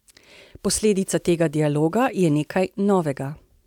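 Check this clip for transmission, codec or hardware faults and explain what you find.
Nothing stood out on listening to this speech recording.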